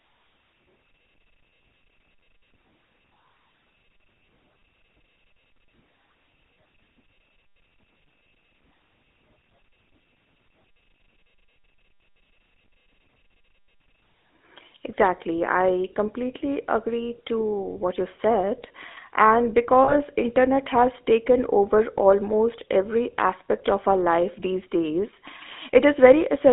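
Throughout, the GSM full-rate codec leaves the speech buzzy and gravelly, band-limited to roughly 250 Hz–3.6 kHz, consistent with 13 kbps regular-pulse coding. From 19.84 to 19.95 s, just before "internet has taken over", lost GSM frames are concealed by repeating the previous frame's settings, producing a brief rough, metallic ring about 40 ms long.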